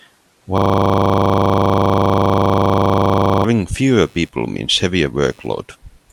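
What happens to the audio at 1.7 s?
At 1.7 s the speech is caught in a system hang loop from 0.58 to 3.44 s. A frozen driver left the hardware replaying one 40 ms buffer, producing a rigid 25 Hz buzzing stutter. On the waveform and spectrogram it appears as an identical slice repeating every 40 ms.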